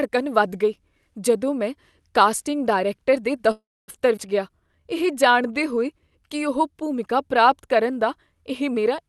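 At 3.51 s the speech stalls until 3.90 s, a call audio freeze. The last sound is stretched into a short fading buzz or hiss, then goes quiet for about 260 ms. That's likely packets held up in transit with the jitter buffer running dry. When they arrive, the speech picks up where it left off, so nothing's lost, just a gap of roughly 0.37 s inserted.

Right after, at 4.16 to 4.19 s, there's a skip ahead. Around a tenth of a second of speech is dropped and the two sides are butted together with only a tiny join. That stretch was lost on the way or thrown out by an overflowing jitter buffer while later audio was already waiting.

From 4.49 to 5.75 s you get a jitter buffer slow-down. The receiver is rebuilding its reserve by repeating single pitch periods, adding 120 ms. So the speech plays at about 91% speed with the pitch unchanged, and sounds come out slightly drawn out. The top end stops around 12 kHz, which fits Opus running at that bandwidth.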